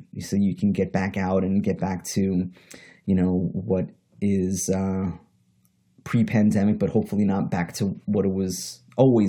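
At 5.79 s there is an overlap between stream segments in this speech. Two consecutive segments, which appear to be about 6 s long, were stamped with overlapping times, and the player discarded the overlapping stretch as though it were duplicated audio. In fact it was unique material, so roughly 11 ms of sound is missing and the waveform jumps straight across the gap. The result is a brief click or tiny skip in the speech.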